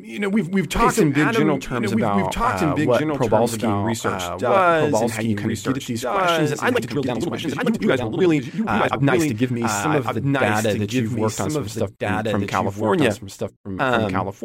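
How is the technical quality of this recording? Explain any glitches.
The recording has two clear technical problems.

Throughout the clip there is a doubled audio track. A second copy of the speech trails the original by about one and a half seconds, roughly 5 dB quieter. It has no room colour. It is likely a second capture path or a misaligned edit.

From 6.71 to 9.51 s there is a time-stretched section. The speech suddenly runs about 1.77 times faster, but its pitch does not rise. The software likely dropped short slices to shorten it. This makes the passage sound rushed.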